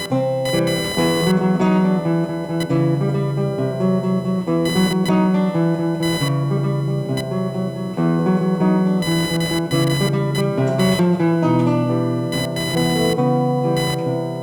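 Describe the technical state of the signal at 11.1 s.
At 11.1 s, computer activity noise runs through the whole clip: processor or peripheral load shifts the shared ground, giving a buzz pulsing near 1 kHz, roughly 15 dB below the signal.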